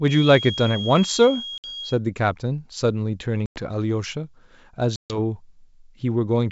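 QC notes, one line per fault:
0.0–2.0 s, feedback whistle: a thin, steady 3.3 kHz whistle about 10 dB under the speech, wavering slightly; likely a speaker-to-microphone loop held just short of runaway.
1.58 s, 3.46 s, 4.96 s, packet loss on an ADPCM call: silent holes of 60, 100 and 140 ms, each fitting several lost packets, then speech returning slightly distorted until the decoder's predictor and step size realign; the surrounding G.722 wideband sound stays clear.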